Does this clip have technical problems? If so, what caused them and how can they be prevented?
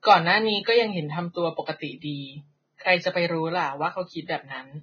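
Yes. Throughout the speech the top end stops abruptly at 6.5 kHz, and what treble remains sounds hissy and grainy, with roughened tones and smeared consonant attacks. This is likely heavy Vorbis compression, at a rate that fits roughly 16 kbps: the encoder drops everything above its cut-off and quantises the upper residue so coarsely that detail turns into noise. A spectrogram shows a flat ceiling with blotchy, speckled energy beneath it. Prevent it by encoding at a higher Vorbis quality setting.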